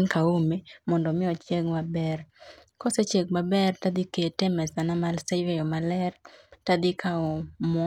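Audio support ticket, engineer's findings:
No faults found on listening; the speech path shows nothing to report, and no component action is needed.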